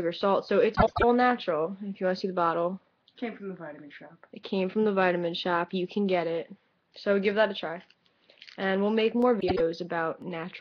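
Frames out of order at 0.75 to 1.04 s: two neighbouring blocks of about 0.1 s each swap places, which fits runs of four frames decoded in the wrong sequence. The stretch plays with its halves exchanged, giving a brief garbled flutter, but no time is lost overall.

Periodic USB or driver dropouts from 8.22 to 10.22 s: a few evenly spaced losses arrive once per second, each a fraction of a millisecond of audio replaced by silence. This points to something repeatedly stalling the USB bus or audio driver on a fixed schedule. Each gap is heard as a regular tick riding on the signal.

Frames out of order again at 9.40 to 9.61 s, overlapping the dropouts: here the two exchanged blocks are shorter, about 78 ms each, consistent with three-frame runs. The swapped halves produce the same choppy flutter.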